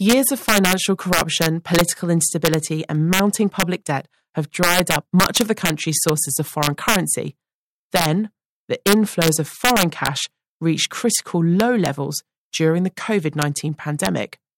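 Throughout the speech, integer overflow breaks the loudest peaks. The signal is driven about 3 dB past the integer ceiling, and instead of being held at full scale, each sample over the limit wraps to the opposite extreme. Only a few samples in every thousand cross, so the damage is sparse but violent: sharp cracks on loud moments, harsher than clipping. The waveform shows peaks snapping from top to bottom rail, and the spectrogram shows thin full-band vertical streaks at those instants.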